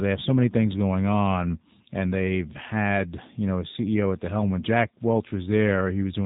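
From start to finish the speech carries the damage of the G.729 codec, plainly audible and with a rough, slightly synthetic edge that fits its 8 kbit/s rate. The codec discards the waveform and rebuilds each short frame from a vocal tract filter, a pitch predictor and a few pulses, so fine detail is lost. Nothing above 3.8 kHz survives. On a spectrogram the energy stops at a hard ceiling there, with smeared harmonics below it.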